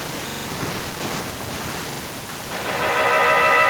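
A stutter at 0.30 to 0.47 s repeats one 43 ms fragment four extra times with hard joins, and a shorter one at 1.92 to 2.01 s repeats it twice. This is a repeated buffer: new audio arrived late, so the last block, which fits a 2048-sample buffer, played again.

From 2.51 s to the end, a piercing tone near 2 kHz swells to about 13 dB above the speech, pulsing roughly every 150 ms. This feedback howl comes from a microphone-to-loudspeaker loop gaining level on each pass.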